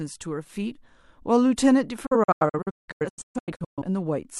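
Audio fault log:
2.06–3.82 s, digital broadcast dropout: Speech mutes in repeated holes, the longest 0.17 s. Lost or corrupt frames were muted, with 8 ms fades, losing nearly a second of audio.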